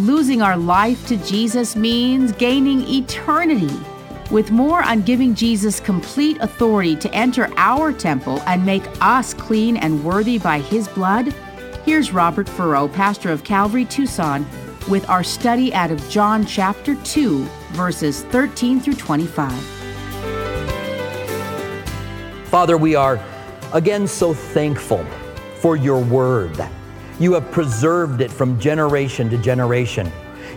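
Right through the clip there's sample clock jitter. The converter's clock is wobbling by a few microseconds, so each sample lands a touch early or late, and the error gets worse wherever the waveform moves fastest. You hear it as a grainy hiss riding on the sound, sitting roughly 35 dB below it, thickening on loud, bright passages and dropping away entirely when things go quiet.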